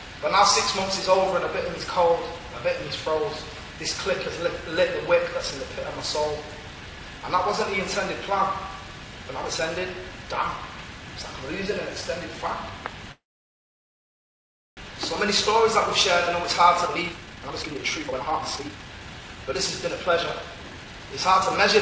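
This is a call recording where everything above 8 kHz is gone, which fits G.722 at 64 kbps. From 13.12 to 14.79 s there's a call audio freeze: the last sound trails off briefly and then goes silent for about 1.6 s. It likely happened because packets stalled and the jitter buffer ran dry. The audio then picks up exactly where it stopped, so nothing's lost, just delayed. From 16.86 to 21.14 s you get a jitter buffer speed-up. Playback runs at 138% with the pitch unchanged, because the receiver keeps snipping out tiny pitch-period chunks, roughly a second and a half in total, to work off that extra delay. It sounds noticeably rushed.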